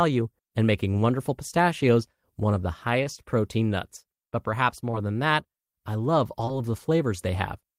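At 3.03 to 3.08 s a short stall from a late packet holds the speech: the jitter buffer ran dry, so the last sound was stretched by about 21 ms and playback resumed with nothing lost. On a spectrogram the harmonics run flat and frozen briefly.

Short concealed packet loss follows at 4.91 to 4.95 s and 6.45 to 6.53 s. Each time, 20 ms never arrived and was filled by extending the preceding sound, giving a quick smear or wobble. The waveform shows a repetitive, slightly mismatched patch, and the spectrogram shows blurred harmonics or a noise smudge.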